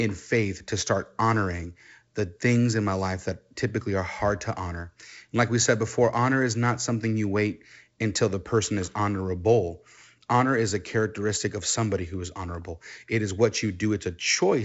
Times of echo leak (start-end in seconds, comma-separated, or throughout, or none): none